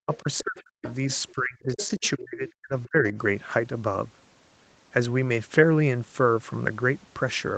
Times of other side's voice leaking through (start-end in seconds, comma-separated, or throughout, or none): 0.13-1.32, 1.76-2.10, 2.84-3.10